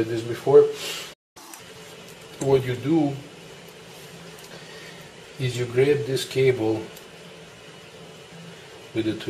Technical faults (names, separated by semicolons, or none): playback stall; catch-up at higher speed; damaged data in a compressed stream